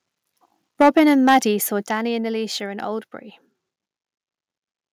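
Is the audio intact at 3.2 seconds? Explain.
Yes, the audio at 3.2 seconds is intact, with no dropout, click, distortion or other fault heard at that point in the speech.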